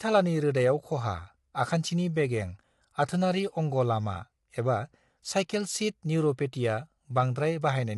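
Throughout, the speech likely passed through low-delay AAC compression at around 32 kbps, leaving it rough and grainy, with noise between harmonics and nothing above 11.6 kHz.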